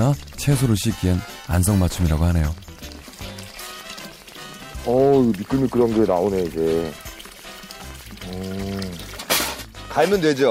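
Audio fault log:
Throughout: Wi-Fi interference. A steady ticking repeats every 102.4 ms, just under ten times a second, sitting roughly 30 dB below the programme. A nearby Wi-Fi radio's beacon transmissions are being picked up and rectified by the audio circuitry, producing one tick per beacon.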